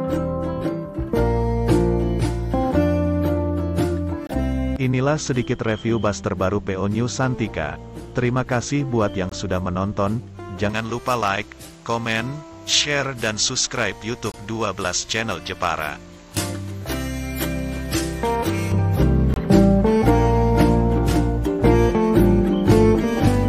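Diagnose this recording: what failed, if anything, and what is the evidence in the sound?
Short hard-edged holes of about 23 ms break the sound at 4.27, 9.29, 14.32 and 19.34 s, every 5 s. This is a gap between chunks at the storage or playback stage.

From 10.69 to 18.72 s the sound turns thin, bright and sibilant, with treble about 11 dB up at 10 kHz. Pre-emphasis was left on: the transmission-stage boost, consistent with a J.17 curve, was never de-emphasised.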